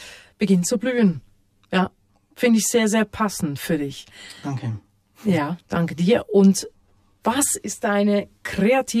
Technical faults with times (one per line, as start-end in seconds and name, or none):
0.00-9.00 channel delay (comb filtering)